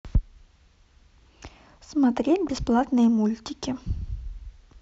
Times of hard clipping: 0.16, 2.79-3.06

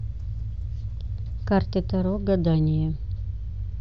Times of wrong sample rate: 0.00-2.18

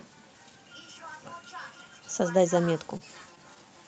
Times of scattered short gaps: 2.65-3.65

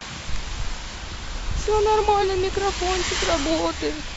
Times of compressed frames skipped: 2.19-2.24

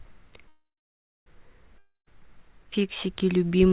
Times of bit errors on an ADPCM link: none

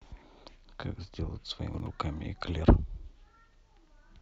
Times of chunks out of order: 1.74-1.86

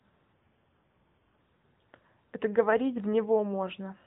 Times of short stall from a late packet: none

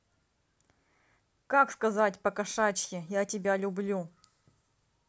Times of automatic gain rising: none

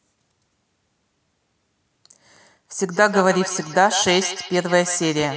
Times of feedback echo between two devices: 2.90-5.37

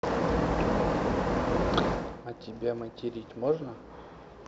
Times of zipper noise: 1.91-2.27

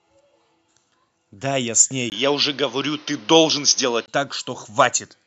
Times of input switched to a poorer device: 2.10-4.08

